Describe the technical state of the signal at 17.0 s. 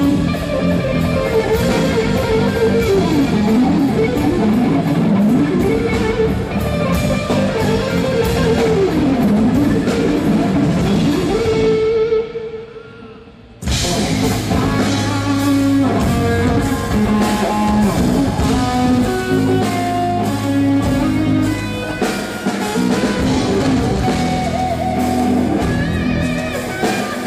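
At 17.0 s the signal is intact, with no audible fault at that moment.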